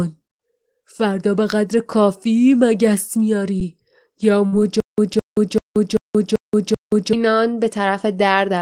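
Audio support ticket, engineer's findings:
Underrun with held sample at 3.60 s and 5.14 s: output buffer ran dry for about 10 ms and 4 ms, converter held last value. Speech goes briefly flat, resumes softly, nothing lost.

Burst of packet loss, 4.46–4.55 s: roughly 60 ms of packets missing. Receiver extended the last sound for 56 ms while fading it, then speech jumps ahead.

Stutter with silent gaps, 4.80–7.13 s: likely player or stream stall. The same 209 ms fragment replays six times, with 178 ms of digital silence between (388 ms period). Intervening speech is lost.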